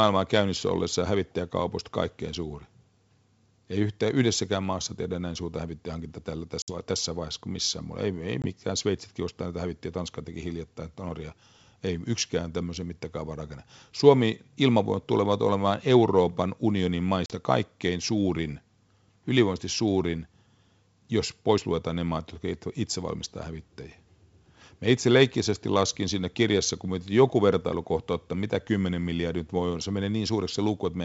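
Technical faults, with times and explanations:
6.62 s, 8.42 s and 17.26 s, packet loss on an ADPCM call: gaps of 60, 20 and 40 ms go silent, the first between "näin suurta hävittäjähankinta tällä" and "tässä vaiheessa kuin missään", the last just before "kaikkein suurin". They show as sharp-edged blank vertical strips on a spectrogram and flat stretches on the waveform. Each loss drops one to a few packets, throwing the G.722 decoder's adaptive predictor and step size out of step with the sender's, so the speech resumes slightly distorted before settling.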